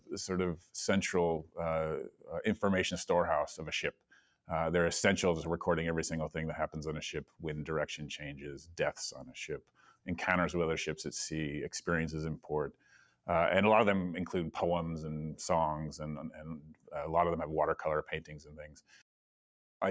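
A noise suppressor applied to music or sounds runs across the whole clip. It was built for speech. Here it treats steady tones, ambience and reverb as noise and pulls them down. The level swings by around 10 dB as it does so. Attacks get through. Held parts and tails sink. The result pumps and thins, and the top stops at 8 kHz through the call's microphone processing.

Sound cut by the noise suppressor shows up eight times. The spans are 0.00–0.74 s, 1.43–2.30 s, 3.89–4.50 s, 7.24–7.44 s, 8.34–10.07 s, 12.41–13.28 s, 16.29–16.94 s and 18.21–19.02 s. Each dip reaches about 18 dB, or about 17 dB at 7.24 s and 18.21 s. Within each span only part is hit, from a fifth of a second to about a second. The 8.34 s span loses the most.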